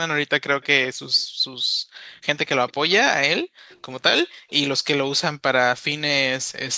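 At 0.61 to 0.66 s there's a faint delayed copy of the speech, roughly 30 dB down and trailing by 226 ms. That's likely an echo leak, with a far-end speakerphone's canceller letting some of its own pickup slip back. The background then gets gated by the echo canceller from 1.26 to 1.45 s and from 1.63 to 1.98 s. The room tone drops about 37 to 40 dB while the canceller clamps the mic, then comes back. The same faint 226 ms echo returns at 2.68 to 2.73 s. The room tone dips again from 3.43 to 3.68 s, and right after it the echo scrap reappears at 3.69 to 3.77 s. One last gated dropout runs from 4.29 to 4.49 s.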